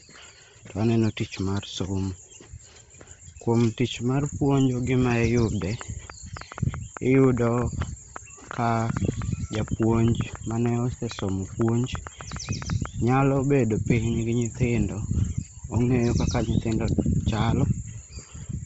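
Throughout the speech, the signal has most likely passed through Bluetooth LC3 compression under heavy strain. The codec's short 7.5 ms frames and a rate that points to roughly 24 kbps leave too few bits for the upper spectrum, so it discards that region and substitutes synthetic noise. Nothing survives above 7.7 kHz, and the voice takes on a breathy, grainy edge.

From 5.62 s to 12.87 s, just before "nyalo bedo", a train of clicks cuts across the audio, probably from electrical interference or a struggling interface injecting repeated pulses. Around fifty similar ticks arrive at about 6.4 per second, unevenly spaced, with the loudest standing roughly 10 dB above the speech. They sound as a ragged popping that carries on through pauses as well as under the talking.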